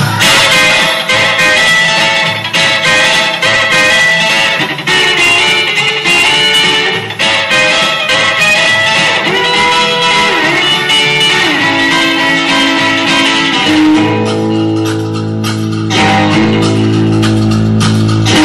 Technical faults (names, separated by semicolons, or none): hard clipping